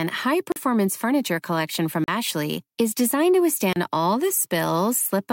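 Blocks of digital silence break this speech clip at 0.52 s, 2.04 s and 3.73 s, each a gap of about 40 ms, 40 ms and 31 ms. In each, the sound cuts out and returns with no fade, leaving a brief hole in the sound. Dropouts this short and sudden point to the output buffer not being filled in time, or to a calculation that produced invalid values.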